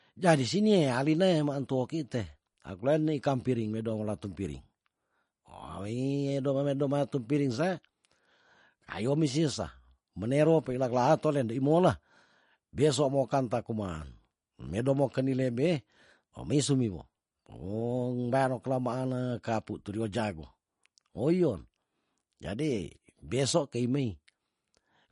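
Throughout, the speech carries plainly audible MP3 compression damage, likely from a low bitrate around 40 kbps. Nothing reaches above 10.5 kHz, dulling s sounds, and weak detail flickers, sounding watery and swirly. A spectrogram shows a ceiling at 10.5 kHz with blinking holes beneath.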